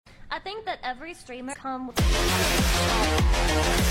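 At about 1.49 s there's a spot of compressed frames skipped: the sound lurches forward, losing roughly 300 ms, which fits a run of about seven 46.4 ms frames going missing. The join runs through 1.54 s.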